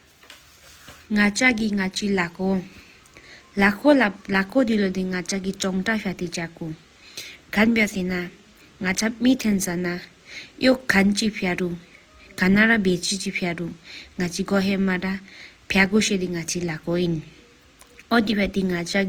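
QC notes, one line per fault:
Throughout: Opus compression. The speech is plainly rough and grainy, with tonal parts turning noisy rather than swirly. The likely cause is Opus in its music (CELT) mode at a rate that fits 24 kbps. Each band keeps its energy, but bands short of bits get filled with folded copies of lower bands or with noise, so the detail becomes noise-like. Bandwidth stays full, with content reaching 20.2 kHz.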